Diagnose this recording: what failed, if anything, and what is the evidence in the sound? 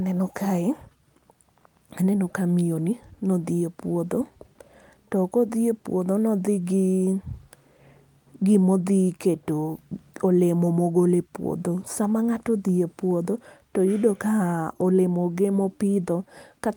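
Nothing failed; no fault is audible anywhere.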